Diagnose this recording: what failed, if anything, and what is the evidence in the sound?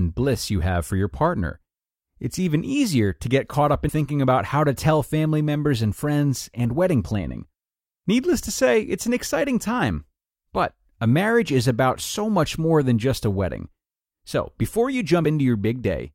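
The failure is at the codec stage: damaged data in a compressed stream. Brief blips occur at 3.89 s, after "to get caught up" and before "about how to tell", and at 15.25 s, after "before you", where corrupted frames break decoder sync until it finds the next frame header.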